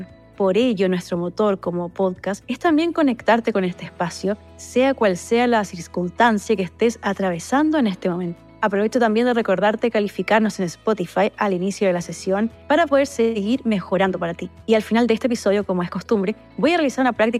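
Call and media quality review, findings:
No audible defects found on review; no component action required.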